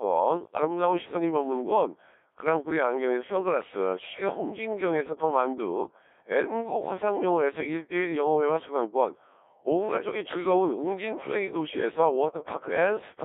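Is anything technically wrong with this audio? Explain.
Yes: throughout, a Codec 2 vocoder, heavily damaging and consistent with roughly 1.3 kbit/s in a 300 Hz to 3.6 kHz band, rebuilds speech from pitch, voicing, energy and envelope alone, so it sounds robotic and buzzy.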